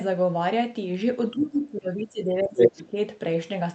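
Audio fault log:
1.31–2.98 s, speech suppressed in double talk: the talker's level sinks and recovers unevenly across this stretch. At its worst it falls by something like 20 dB, with around a second and a half affected in all. The likely cause is an echo canceller that heard both sides at once, could not separate the talker from the loudspeaker echo, and turned the whole signal down.
2.57–2.82 s, other side's voice leaking through: a second voice surfaces for about a quarter of a second, roughly 10 dB above the talker's speech. The likely cause is that the talker's device was playing the far end over a loudspeaker, and the echo canceller did not fully remove that playback from the microphone signal. The scraps that slipped past it reach the listener as this intruding voice.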